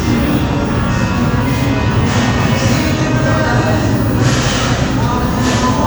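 Nothing stood out on listening to this recording of everyday sounds.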